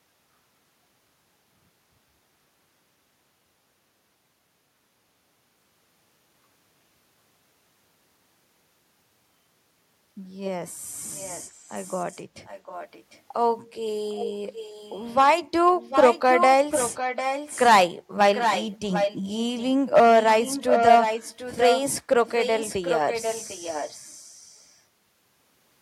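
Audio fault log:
11.15–13.2 s, 14.09–15.15 s, 15.82–17.7 s, 18.33–21.81 s, 22.26–24.77 s, echo leak: a delayed copy of the speech returns 749 ms late, faint at first (about 20 dB down), nearly as loud as the speech from 15.82 s to 21.81 s (about 5 dB down), then about 10 dB down. The likely cause is an echo canceller on a loudspeaker end failing to remove what its microphone picked up and sending it back.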